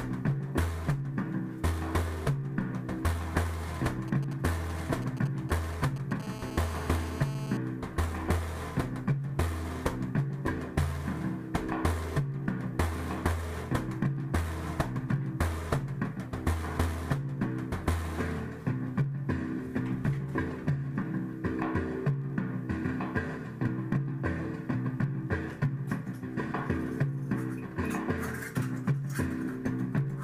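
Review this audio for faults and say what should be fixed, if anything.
GSM signalling bursts, 3.76 to 6.22 s: a nearby 2G phone sends short groups of radio bursts at about 217 Hz while signalling, and the audio circuit rectifies them into a galloping dit-dit-dit of brief buzzes, roughly 15 dB below the signal. Keep phones away from the recording chain, or switch them off.

GSM phone buzz, 6.23 to 7.57 s: once the call is established, the phone transmits in bursts about 217 times per second, and rectification turns this into a hard, raspy 217 Hz buzz with many harmonics, about 14 dB below the signal. Prevent it with phone distance or airplane mode, plus well-shielded, balanced cabling.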